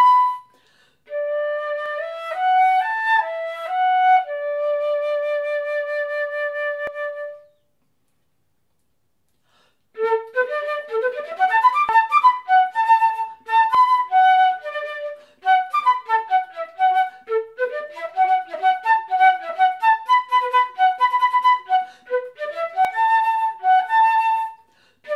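Five spots have the same stumble: at 1.86, 6.87, 11.89, 13.75 and 22.85 s the sound jumps forward with no gap, as if a slice just vanished. Each skip is around a tenth of a second. That's most likely a dropped buffer (overrun), where the program didn't grab its samples in time, the hardware wrote over them, and the audio on either side got spliced straight together.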